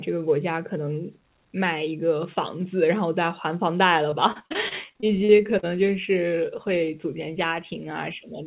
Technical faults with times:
4.10-5.65 repeated packet loss (robotic sound)

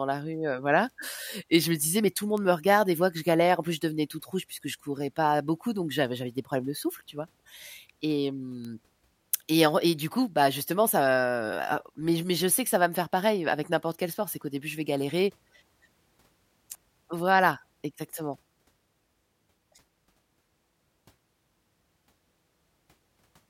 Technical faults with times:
2.37 bit error spike
8.65 bit error spike

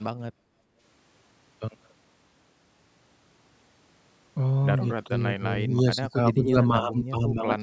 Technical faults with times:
0.32-0.78 background gated by the echo canceller
5.05-7.63 speech suppressed in double talk

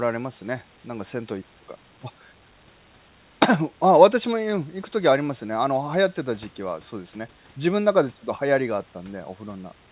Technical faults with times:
none

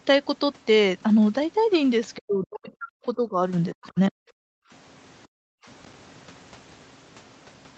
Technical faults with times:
2.17-3.38 speech suppressed in double talk
3.72-4.17 speech suppressed in double talk
4.45-4.71 background gated by the echo canceller
5.28-5.34 background gated by the echo canceller

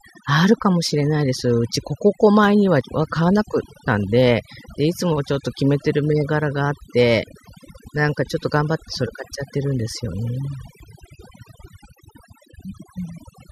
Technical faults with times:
0.00-13.52 overdone noise removal
2.81 overlap between stream segments
6.81-6.83 overlap between stream segments
10.80 overlap between stream segments

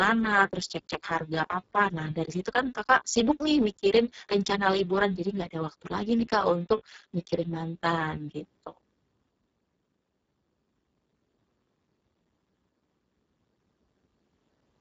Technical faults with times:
0.00-14.80 Speex codec

